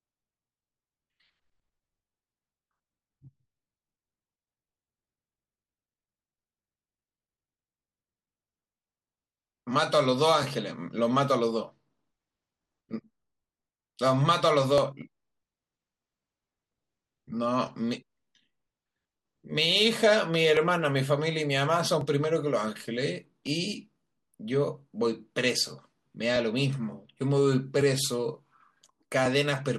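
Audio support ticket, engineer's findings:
Clock drift buffer slips, likely from two devices on independent clocks about 0.1% apart. Buffer overruns or underruns, dropping or repeating a block of roughly 70 samples. Heard as a click every 1.45 s, from 0.31 s to 29.26 s, about twenty across the speech.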